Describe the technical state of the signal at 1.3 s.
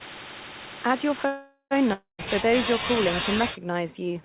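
Call audio freeze, 1.26 to 1.73 s: the last sound stretches into a fading buzz, then brief silence, likely from an emptied jitter buffer. Speech resumes with nothing lost.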